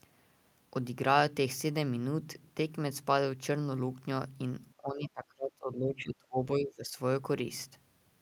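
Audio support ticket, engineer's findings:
Speech suppressed in double talk, 4.77–6.97 s. Level collapses by roughly 25 dB at its deepest, with about two seconds of speech dipped or cut out in pieces. Likely the echo canceller's suppressor: with both ends active at once, it could not tell near-end speech from loudspeaker echo and attenuated both.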